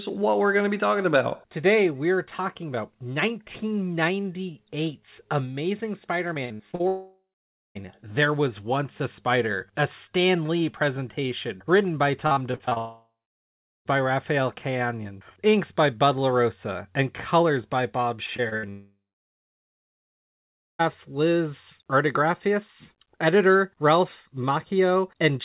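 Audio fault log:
6.34–6.81 s, 12.27–12.78 s (just after "presentation written by"), 18.27–18.66 s: repeated packet loss (robotic sound). The sound turns choppy as five, seven and five short holes, the longest 45 to 58 ms, are patched by repeating the preceding sound, which covers about 30 to 40 percent of each stretch.
6.87–7.77 s, 12.78–13.87 s, 18.70–20.81 s: long network dropout. Each loss run ends in a brief fading buzz or hiss, then silence of 0.53 s, 0.76 s and 1.83 s. The audio resumes with 0.88 s, 1.08 s and 2.1 s gone, likely because packets stopped arriving altogether.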